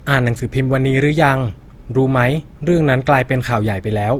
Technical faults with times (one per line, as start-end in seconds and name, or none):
0.00-4.19 generation loss